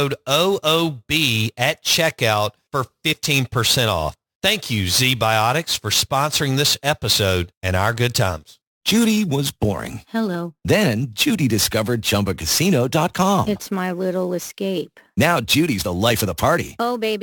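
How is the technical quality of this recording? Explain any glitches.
The speech has a few problems: a constant roughness plus some short glitches.

Sample clock jitter runs throughout. The converter's clock wobbles by something like 10 microseconds, so fast-changing parts of the waveform get sampled off-target. That adds a hiss, fairly strong at around 15 dB below the signal, which gets worse on loud, bright sounds.

Compressed frames skipped shows up at 3.11–3.14 s after "at checkout for", at 7.08–7.14 s between "for sponsoring this" and "and our good", at 8.32 s after "and our good", and at 14.49 s. Each time, roughly 20 ms of audio is lost and the speech jumps ahead.

A corrupt frame decoded at 16.19–16.21 s. One damaged frame was played anyway, which puts energy at the wrong frequencies and gives a brief glitch such as a chirp, squeak or burst of noise.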